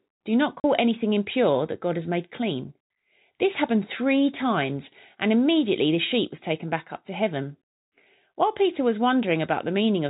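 At 0.60 s the speech drops out for 40 ms, just before "anything impure that": packet loss filled with silence, likely two 20 ms packets, replaced by silence. The waveform shows a flat gap with abrupt edges; the spectrogram shows a blank column within the G.711 telephone band's 4 kHz ceiling.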